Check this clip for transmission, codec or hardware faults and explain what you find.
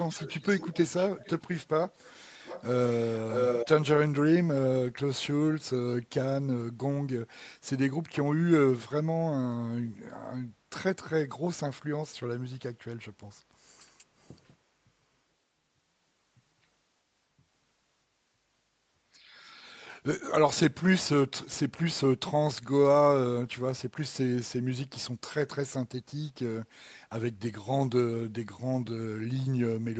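One fault is present: an echo leak in the first four seconds of the speech. The call's microphone path carries nothing above 8 kHz.

Echo leak: at 0.0–1.65 s, 1.88–2.19 s and 2.43–3.68 s, a copy of the speech returns 0.65 s late, likely from a loudspeaker whose echo canceller missed it. It starts fairly quiet, turns faint, then matches the speech. Spectrograms show harmonic patterns repeated 0.65 s later; waveforms show doubled envelopes.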